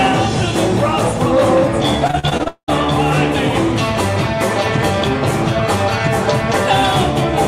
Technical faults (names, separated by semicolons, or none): repeated packet loss (robotic sound)